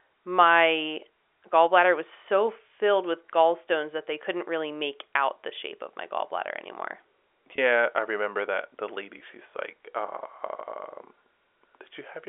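At 7.56 to 7.58 s and again at 9.18 to 9.20 s, packet loss with pitch repetition fills each 20 ms gap by replaying the last pitch period. It sounds like a brief held buzz, and the waveform shows identical repeated cycles, with flat harmonic stripes on a spectrogram, all within the G.711 telephone band.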